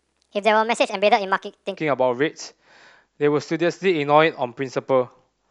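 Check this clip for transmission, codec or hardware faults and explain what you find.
One fault is present. From 0.00 to 1.77 s, the speech sounds high and hurried, about 1.38 times too fast and 5.55 semitones sharp. This is a wrong sample rate: playback runs faster than recording without conversion, which fits 32 kHz audio played at 44.1 kHz.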